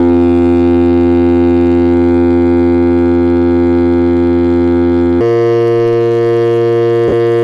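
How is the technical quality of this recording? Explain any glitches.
The technical quality is poor, with two clear faults in this music recording.

From the start to 5.21 s there is a section at the wrong speed. It was likely played out against the wrong clock, running at 0.742 times its recorded rate. Because speed and pitch are tied together, everything in that stretch drops by roughly five semitones and drags noticeably. The instruments sound deep, heavy and sluggish until normal speed returns at 5.21 s.

From 7.08 to 7.13 s there are lost LE Audio frames on the Bluetooth link. That 40 ms gap fits four 10 ms LC3 frames going missing. To fill the gap, the decoder keeps repeating the last good spectrum with scrambled phase and lets it fade. Instead of clean tones, you hear a short, hissy smear that briefly blurs the music before the decoded signal resumes.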